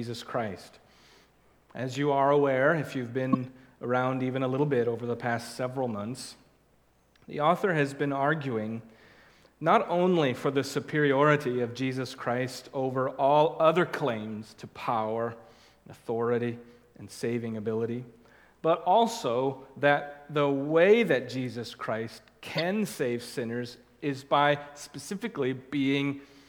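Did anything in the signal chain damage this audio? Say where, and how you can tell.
Yes. Corrupt frame decoded, in the codec, at 3.32 to 3.35 s, 18.75 s and 22.56 to 22.62 s: short chirps, squeaks, blips or bursts of noise where damaged frames decoded energy at the wrong frequencies.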